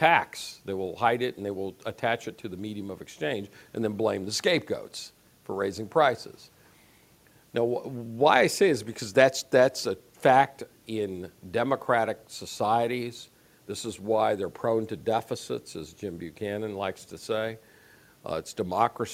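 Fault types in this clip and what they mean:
Nothing stood out on listening that would count as a technical fault.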